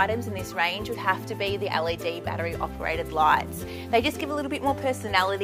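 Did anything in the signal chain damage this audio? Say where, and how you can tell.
No, nothing along the chain has left a mark I can hear; the sound just comes across as it should, with nothing at any stage pointing to damage.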